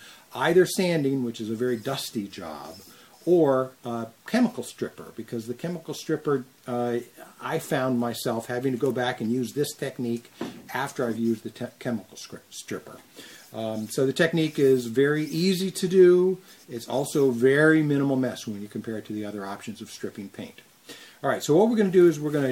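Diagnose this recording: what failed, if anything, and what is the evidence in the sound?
Clock slip clicks from 0.17 s onward: faint ticks, about ten per second. Likely unsynchronised converter clocks roughly 200 ppm apart, slipping one sample each.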